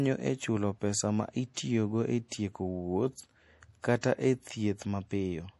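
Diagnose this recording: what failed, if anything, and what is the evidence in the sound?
The codec stage is the problem. The whole clip has a watery, swirly quality and nothing above 11.5 kHz, with s sounds turning chirpy and smeared. That's likely MP3 compression, and the damage fits a low bitrate around 48 kbps, where the encoder cuts the top end and lets weak lines flicker.

There's pre-echo too, from 1.54 to 1.57 s. A short hiss creeps in about 30 ms ahead of a sharp onset, which then sounds soft. The transform block spread its quantisation noise, sized for the loud attack, back into the quiet bit before it.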